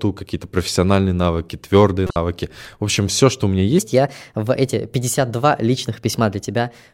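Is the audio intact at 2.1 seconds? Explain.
No, there's a corrupt frame decoded from 2.07 to 2.16 s: around five damaged frames got played anyway, smearing energy into the wrong frequencies as a brief chirpy burst.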